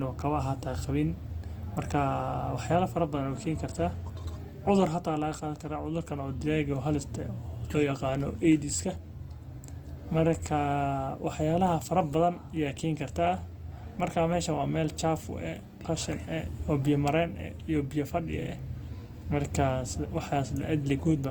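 From start to end the speech has a grainy, rough texture, with vowel tones turning noisy instead of clean. This is likely Opus compression in its music (CELT) mode, at a rate that sounds near 24 kbps, where starved bands are filled with folded or noise-like content rather than left empty. A spectrogram shows energy reaching about 20.2 kHz with few holes, but harmonics look smeared and speckled.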